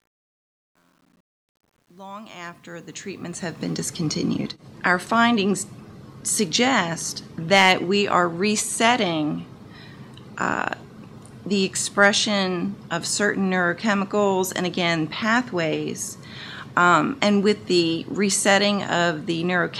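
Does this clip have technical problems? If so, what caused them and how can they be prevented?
Yes. Truncation distortion on a fade runs from 0.0 to 3.91 s and is worst between 0.0 and 2.89 s. An undithered level stage with too few bits, which fits about 10 bits, turns the quiet waveform into coarse steps and grit. Preventing it requires enough bit depth and dither in every gain stage.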